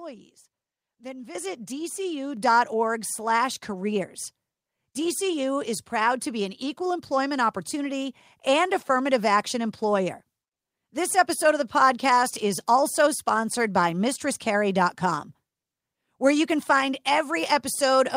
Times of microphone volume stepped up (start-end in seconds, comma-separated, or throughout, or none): 1.35, 2.37